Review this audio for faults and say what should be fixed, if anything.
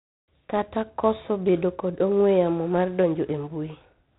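G.726 ADPCM damage runs throughout: the speech is band-limited at 3.9 kHz and carries a harsh, level-following hiss from coarse prediction-difference coding, which fits 24 kbit/s. To prevent it, capture or pass the speech at 32 kbit/s or above, or through a wideband codec, rather than at this lower rate.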